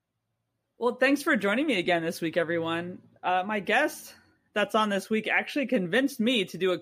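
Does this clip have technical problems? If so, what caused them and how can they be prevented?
No, no technical faults.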